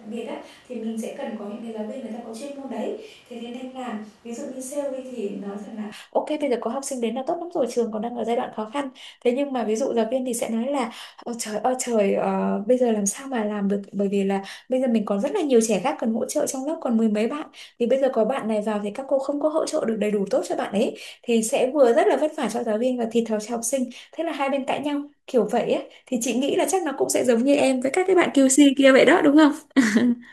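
From the very start until about 5.92 s, the speech sounds roomy and hollow, thin on bass, roughly 10 dB quieter, with background noise about 25 dB below it. That's likely a switch to a distant microphone, with the close mic's signal missing, before it cuts back.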